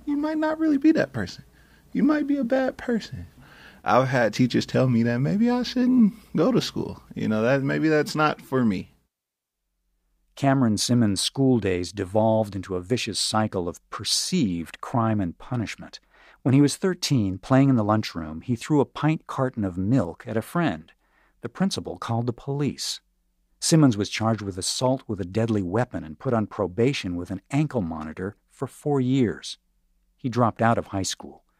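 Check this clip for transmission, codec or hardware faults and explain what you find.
No transmission, codec or hardware faults.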